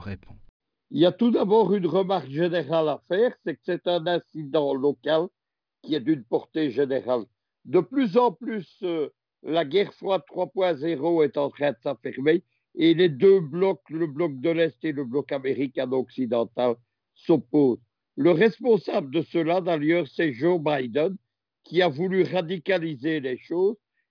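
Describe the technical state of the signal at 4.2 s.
At 4.2 s the signal is intact, with no audible dropout, distortion, clipping or other fault.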